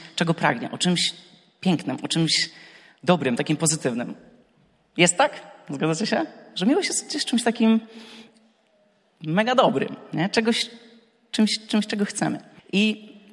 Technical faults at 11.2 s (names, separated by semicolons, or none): resampler restarted on every block